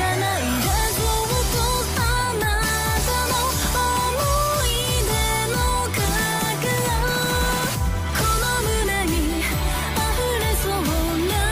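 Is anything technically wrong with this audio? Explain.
No, nothing technically wrong can be heard here.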